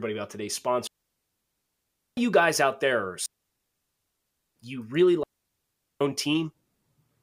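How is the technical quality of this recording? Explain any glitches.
The recording is marred by repeated digital wireless dropouts, where the radio link lost too much data and the receiver muted itself with only a very short fade. Each one leaves a clean hole of near silence, with no noise burst on either side. The first runs from 0.87 to 2.17 s (1.3 s), after "about today's" and before "you guys out there". The second runs from 3.26 to 4.56 s (1.3 s), after "guys out there are" and before "you really". The third runs from 5.23 to 6.01 s (about 0.77 s), just after "you really".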